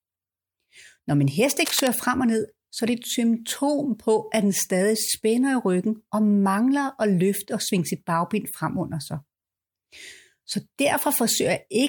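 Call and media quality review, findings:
Worn cable or connector likely shifting, contact resistance jumping: cable scratch noise, 1.60–1.87 s, after "min hest", before "frem og ned så"; rough scratchy bursts roughly 10 dB under the speech.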